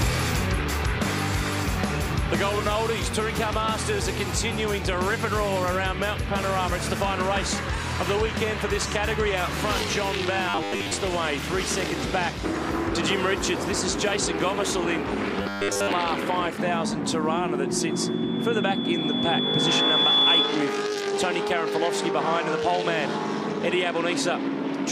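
From 10.49 to 10.92 s and again from 15.43 to 15.93 s, the sound turns into a rigid, metallic buzz at 100 Hz. This is robotic sound from repeated short buffers, likely caused by the same 10 ms stretch being replayed for most of each span while new audio was skipped.

From 17.79 to 20.68 s, a loudspeaker feedback squeal appears: a single 3.4 kHz tone that swells over roughly two seconds until it sits clearly above the rest of the sound. A microphone is picking up its own loudspeaker, and the loop gain exceeds one at that frequency.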